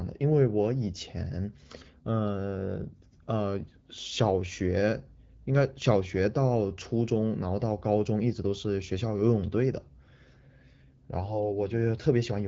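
Nothing in this speech recording points to a technical problem. It has passed through the AMR wideband (HD Voice) codec at 12.65 kbit/s, which leaves only light coding traces and carries the sound up to about 7 kHz, with the top band above 6.4 kHz filled in by shaped noise.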